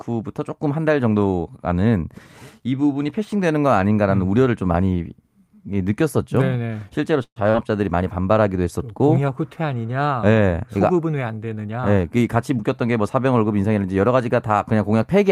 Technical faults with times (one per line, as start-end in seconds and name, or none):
7.23-7.38 call audio freeze
7.50-7.56 short concealed packet loss
11.71-12.99 jitter buffer speed-up